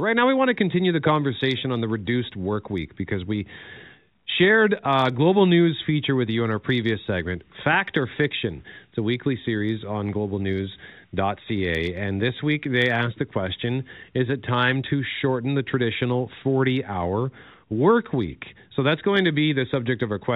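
No technical faults can be heard anywhere in this speech recording. It carries the band limit of G.711 A-law telephone coding at 64 kbps, with nothing above 4 kHz, and any quantisation noise from that coding stays faint beneath the speech.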